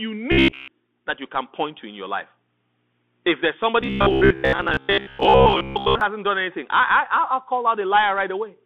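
Throughout the speech, the sound carries the character of a Bluetooth CVSD headset codec. The band runs from about 200 Hz to 3.5 kHz, with nothing above 4 kHz. The coder sends one bit per sample, a step up or down, which fits a 64 kbps CVSD stream. The damage is plainly audible. Sibilants come out scratchy, louder bright passages smear where the adaptive step cannot keep pace, and a granular hiss sits beneath the speech.

From 0.32 to 0.71 s, just before "that you can point", and again from 3.81 to 6.01 s, ending just before "hasn't done anything I", the speech turns into robotic sound. The likely cause is repeated short buffers: audio arrived too late, and playback filled each gap by replaying the last fragment of roughly 15 ms. Most of the audio in these stretches is repeats, so the real material in between is lost. The repetition imposes a fixed 66.8 Hz buzz, giving a rigid metallic drone that only loosely tracks the speech.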